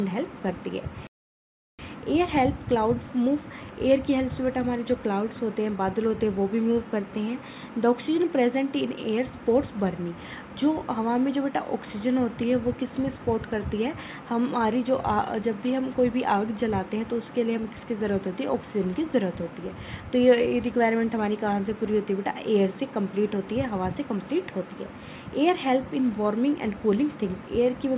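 At 1.07 s the sound cuts out abruptly and the output stays silent for about 0.72 s, until 1.79 s, when it picks up again. This is a playback stall, likely caused by the player running short of buffered data or its audio thread being held up, so nothing reached the output until it caught up. Across the clip the band stops at 4 kHz, as expected from the G.711 call path the audio travelled through.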